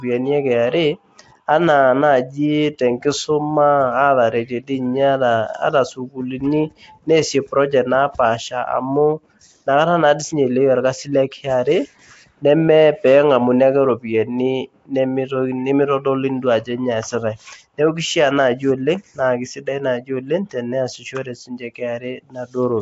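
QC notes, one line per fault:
Throughout: Nellymoser compression. Rough, hissy halo and smeared, underwater character on the speech, with nothing above 7.7 kHz. The likely cause is Nellymoser Asao coding, which fits a 32 kbps stream: starved bands are replaced with noise and 256-sample blocks blur transients.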